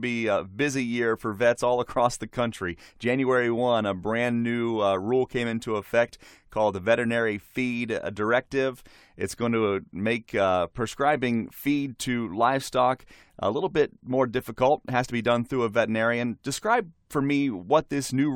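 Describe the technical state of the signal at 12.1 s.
At 12.1 s the speech signal is intact, with no audible fault.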